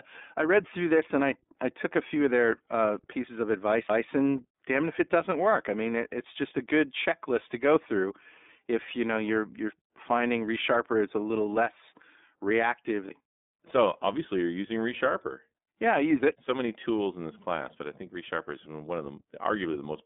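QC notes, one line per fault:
throughout, iLBC codec: each 30 ms frame is coded on its own within a narrow band, so speech sounds plainly rough and synthetic, with nothing above 3.8 kHz, which fits the 13.33 kbps mode.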